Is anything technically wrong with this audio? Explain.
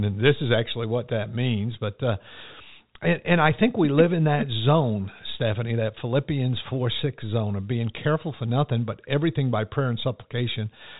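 No, nothing's wrong here: the speech sounds like a normal G.711 telephone line, with the top end stopping at around 3.8 kHz, just as that phone format should.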